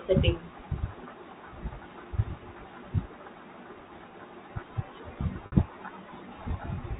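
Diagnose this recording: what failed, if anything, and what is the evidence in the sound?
Packet loss with pitch repetition at the network stage, 5.46 to 5.52 s. About 60 ms is lost, which fits three 20 ms packets on a G.711 telephone path. The receiver loops the last pitch period, fades it, then cross-fades back. Waveforms show identical, decaying cycles, and spectrograms show frozen harmonics.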